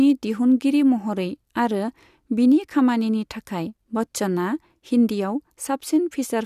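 Nothing in this bit of speech trips a technical alarm; there's no fault to point to anywhere along the way.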